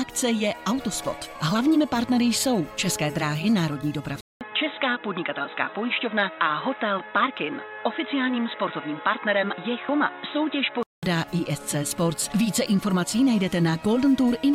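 From 4.21 to 11.03 s the audio turns dull and boxy, cut above 3.9 kHz, slightly quieter, with a new noise floor and 200 ms of silence at the switch: likely an input switched to a poorer device, not plain filtering.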